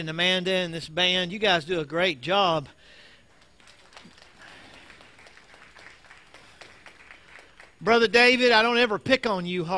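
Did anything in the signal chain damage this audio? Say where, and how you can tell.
No, nothing in the signal chain damaged this audio that I can point to.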